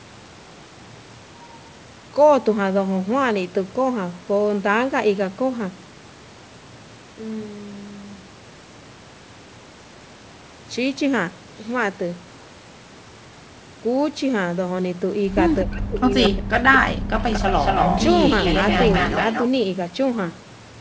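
A speech recording that's fine up to about 15.6 s, then the back five seconds fall apart. From 15.64 to 16.53 s and again from 16.78 to 17.16 s the voice drops out in chunks, sinking by roughly 40 dB at the worst points, around a second of lost speech all told. That's speech suppressed in double talk, most likely the far end talking over this side, so the echo canceller couldn't tell the local talker from loudspeaker echo and ducked everything. Right after, from 17.19 to 18.04 s and 18.27 to 19.49 s, a second copy of the voice trails the original by 229 ms. In the first stretch it's about as loud as the speech itself, and in the second a little quieter, around 5 dB down. That's an echo leak, probably a speakerphone whose canceller let part of its mic pickup through and sent it back down the line. Throughout, the sound is band-limited with nothing above 8 kHz, which fits the microphone processing and a wideband call codec along the lines of G.722.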